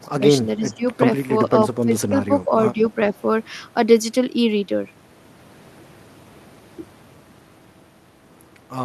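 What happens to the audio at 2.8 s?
Just before 2.8 s, from 2.74 to 2.79 s, the speech briefly sinks in level for about 50 ms, a shallow dip of roughly 5 dB before it recovers. This is speech suppressed in double talk, likely caused by both ends talking at once: the echo canceller couldn't tell the near talker apart from the returning loudspeaker echo, so it pulled down everything in that stretch, including the wanted speech.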